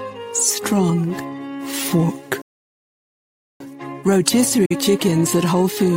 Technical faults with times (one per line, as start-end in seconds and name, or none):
2.42-3.60 playback stall
4.65-4.76 digital broadcast dropout